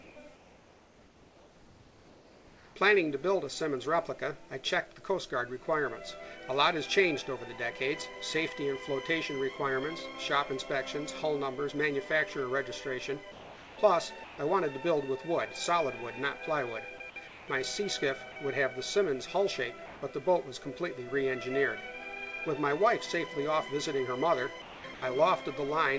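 From 0.02 to 0.16 s, the background becomes smoother, steadier synthetic hiss at matching level. This is comfort noise in place of the background, likely inserted while the sender paused transmission. The same happens from 13.32 to 13.78 s, about 2 dB quieter.

At 14.24 to 14.38 s, about 50 ms of sound vanishes into that noise. This is sound dropped by the voice detector, likely mistaking real sound for background.

Comfort noise returns from 17.28 to 17.48 s, again about 2 dB quieter. A 40 ms dropout follows at 18.32 s. Comfort noise appears once more from 19.86 to 20.02 s at matching level.

Near the end, sound cuts out at 24.62 to 24.84 s, losing 190 ms, and at 24.94 to 25.02 s, losing 80 ms.

Throughout, the call codec path passes nothing above 8 kHz.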